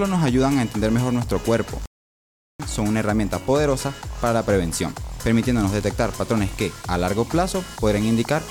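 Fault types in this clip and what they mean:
Playback stall: The player likely ran short of data or was blocked, so the audio drops to silence for about 0.74 s, from 1.86 to 2.60 s, then resumes.
Loose connector crackle: A worn or dirty contact briefly makes and breaks, chopping the signal into a short scratchy burst of crackle between 6.04 and 6.08 s.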